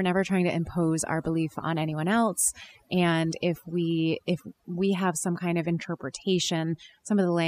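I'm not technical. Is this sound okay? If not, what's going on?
No, it's not quite right. The whole clip has overdone noise removal: a cleanup tool was pushed too hard, so it cut down the background noise but also scraped away softer parts of the speech. That leaves a much quieter background with little sparkly blips.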